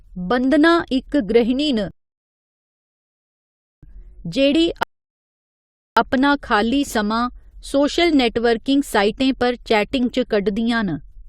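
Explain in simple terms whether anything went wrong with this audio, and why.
The speech stops twice and goes silent: from 1.91 to 3.83 s, and again from 4.83 to 5.97 s. These are rebuffering stalls. The player ran out of downloaded audio and waited for more. Unlike a dropout, where a piece of sound vanishes and you hear a jump, here the speech picks up exactly where it stopped, so nothing is missing. The stalls only add time, about 1.9 s and 1.1 s.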